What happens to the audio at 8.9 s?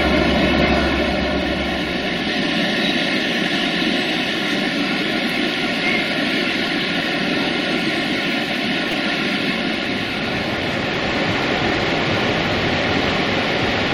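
At 8.92 s there is a repeated buffer: audio arrived late, so one block of about 5.8 ms, which fits a 256-sample buffer, played three times in a row. It sounds like a brief click or buzz, and roughly 10 ms of audio is lost. The waveform shows an identical short segment tiled with hard joins, and the spectrogram shows a thin vertical smear.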